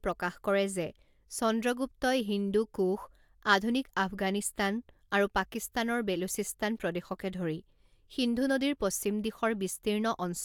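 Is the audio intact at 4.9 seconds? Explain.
Yes, the audio is intact at 4.9 seconds, with the speech continuing without any dropout, click or distortion at that point.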